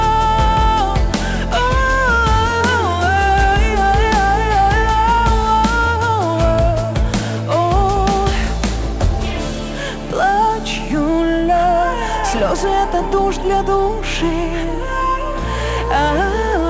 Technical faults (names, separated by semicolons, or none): aliasing